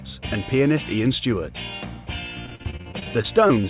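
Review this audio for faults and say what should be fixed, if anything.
Repeated packet loss (robotic sound) runs from 2.46 s to 3.65 s: 13 gaps, the longest 42 ms. The receiver patched each hole by extending the last sound, 291 ms in all, about a quarter of that stretch. Another 220 ms was simply lost. The result is choppy and robotic. On a spectrogram, identical frames repeat as flat, smeared bands with hard vertical seams. The waveform shows copied cycles interrupted by breaks. Everything stays below 4 kHz, as expected for the G.711 call path. To prevent this, fix the network loss and jitter upstream, or enable forward error correction and a deeper jitter buffer.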